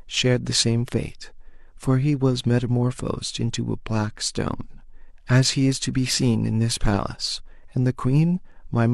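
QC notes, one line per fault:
No faults found in this speech clip.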